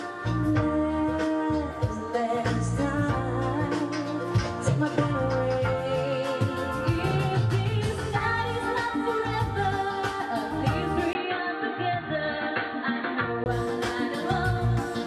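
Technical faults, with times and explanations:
11.13–13.46 s: input likely switched to a poorer device; a 20 ms gap, then nothing above 4.4 kHz, so dull sound with faint new noise.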